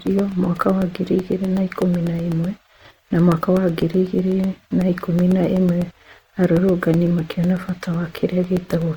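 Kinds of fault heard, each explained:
Opus compression: The speech sounds plainly grainy and rough throughout, with a noisy texture instead of clean tone, though the band stays full. This likely comes from Opus in its CELT music mode at a low rate around 24 kbps, filling starved bands with noise.
Periodic USB or driver dropouts: Steady ticks run through the clip from 0.07 s to 8.94 s, one every 0.125 s, about eight per second. Each is roughly a millisecond of audio replaced by silence, around seventy in all, as something regularly stalls the bus or driver.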